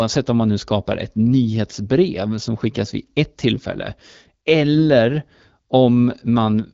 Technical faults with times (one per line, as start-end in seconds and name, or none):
4.74-4.80 AMR bit errors